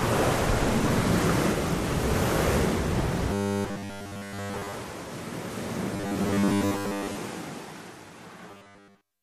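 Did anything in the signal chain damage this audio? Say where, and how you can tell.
Yes. Robotic sound from repeated short buffers at 3.33–4.73, 5.94–7.15 and 8.51–9.22 s, likely a driver or buffer underrun looping 10 ms blocks. It shows as a rigid 100 Hz comb of harmonics and periodic waveform repeats.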